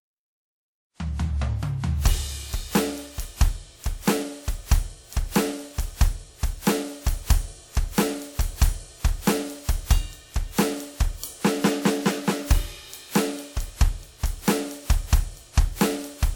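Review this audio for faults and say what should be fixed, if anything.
The music has most likely been through repeated lossy transcoding, decoded and re-encoded around seven times with a codec whose character points to WMA at roughly 96 kbit/s. Each pass requantises on a fresh frame grid, so noise and spectral gaps accumulate. This generation loss runs through the whole clip: a swirly, hollow, smeared texture, softened attacks, and nothing above about 19.9 kHz. To prevent it, keep a lossless master and encode to the lossy format only once, from that source.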